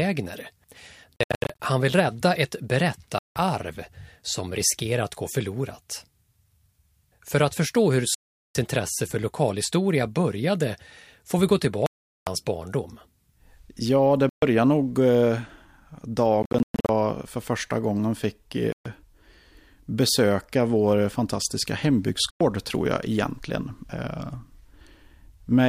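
Speech with abrupt silent gaps at 1.17, 3.18, 8.15, 11.86, 14.29, 16.43, 18.72 and 22.30 s, each resuming as if it had played on, likely a Bluetooth dropout of lost radio packets.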